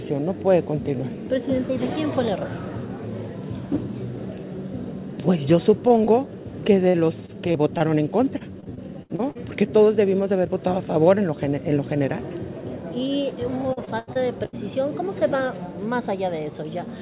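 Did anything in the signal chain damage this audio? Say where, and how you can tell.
Yes. The damage happened in the network stage of the call. Three short concealed packet losses cluster at 5.88, 5.98 and 6.05 s. Each is a hole of about 20 ms, heard as a quick smear or wobble. The receiver patched each gap by extending the last waveform, pitched if the sound was voiced and as shaped noise if not, then cross-faded back into the real signal. The audio sits inside the G.711 mu-law band limit of 4 kHz.

Repeated packet loss gives a choppy, robotic sound in three stretches. From 6.89 to 7.82 s there are four gaps, about 12% of that span. From 8.38 to 9.37 s there are eight gaps, about 23%, the longest 68 ms. From 13.73 to 14.55 s there are five gaps, about 29%, the longest 84 ms. The concealment keeps repeating the last fragment before the next loss arrives, so pieces go missing.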